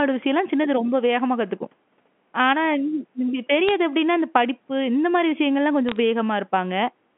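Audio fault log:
3.68–3.71 s and 5.89–5.96 s: bit errors on a digital phone line. Brief bursts of sharp ticks and crackle over the narrowband G.711 telephone sound, at a few errors per thousand bits. Each flipped bit corrupts one sample, and hits on high bits or on the sign of loud samples produce the loudest clicks.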